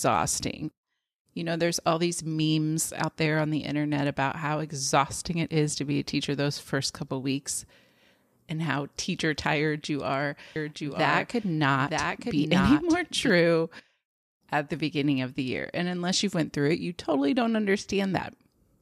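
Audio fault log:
10.56–13.30 s, doubled audio track: A second full-band copy of the speech runs about a second behind the original, a few decibels quieter. It has no decay or room colour and starts and stops abruptly. A slower second capture path is the likely cause.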